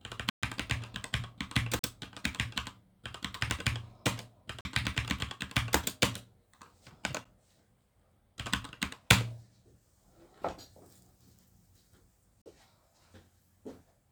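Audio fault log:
0.30–0.43 s: block of digital silence. The output buffer likely went unfilled for 128 ms, so the sound drops straight to zero and returns with no fade, leaving a short hole.
1.79 s, 4.61 s, 12.42 s: block of digital silence. Each gap lasts about 43 ms, which fits a missed 2048-sample buffer at 48 kHz. The abrupt cut out and back in is heard as a brief pop-like dropout.
7.24 s: block of digital silence. A 9 ms stretch of zeros is too short to register as a gap, so its two hard edges merge into a single tick.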